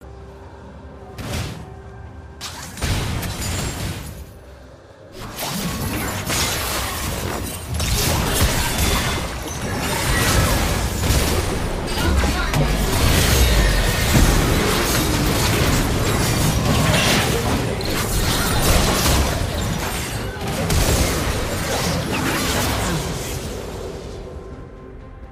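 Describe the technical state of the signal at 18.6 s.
At 18.6 s the signal sits inside a run of clock drift buffer slips lasting from 0.46 to 25.24 s: a click every 0.64 s, likely from two mismatched clocks, roughly 500 ppm apart, dropping or repeating a small block of samples. The waveform shows small step discontinuities, and the spectrogram shows thin vertical broadband lines at that steady spacing.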